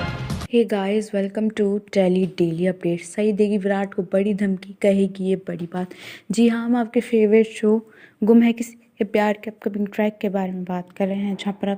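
No faults can be heard anywhere in the clip.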